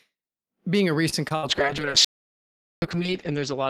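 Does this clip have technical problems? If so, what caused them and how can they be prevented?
Yes. A short stall from a late packet at 1.09 to 1.14 s holds the sound about 30 ms while the emptied jitter buffer waits, then resumes without loss. A larger jitter buffer margin prevents it.

Short concealed packet loss at 1.28 to 1.32 s drops about 20 ms, which is bridged by continuing the preceding sound, leaving a brief smear. Forward error correction or redundant packets would prevent it.

A burst of packet loss at 1.36 to 1.45 s removes about 60 ms, concealed as a fading extension before audio resumes further on. Steadier network routing and in-band FEC prevent it.

A call bitrate drop from 1.49 s to the end takes the encoder from 48 to 8 kbps, narrowing bandwidth from 20 kHz to 8 kHz, with the lowest rate held for 1.58 s. The sound turns coarse and muffled. Reserving more bandwidth or using less aggressive rate adaptation prevents it.

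An audio dropout to silence from 2.05 to 2.82 s leaves about 0.77 s of digital silence with no room tone. It was likely caused by a lost input device or link. Secure connections and input monitoring prevent it.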